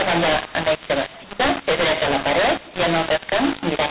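From start to finish, the speech carries a mu-law and A-law mix-up: samples coded with G.711 mu-law are decoded as A-law, scrambling every level. Unlike clipping, loud and soft passages both distort, and pauses hiss with noise instead of falling silent.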